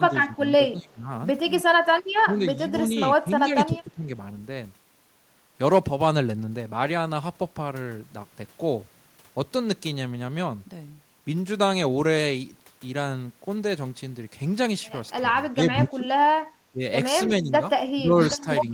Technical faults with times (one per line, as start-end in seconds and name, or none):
0.00-1.09 speech suppressed in double talk
1.64-1.85 speech suppressed in double talk
2.23-2.58 speech suppressed in double talk
2.89-4.07 speech suppressed in double talk
15.51-16.06 speech suppressed in double talk
16.72-16.81 speech suppressed in double talk
17.28-17.62 speech suppressed in double talk
17.95-18.72 speech suppressed in double talk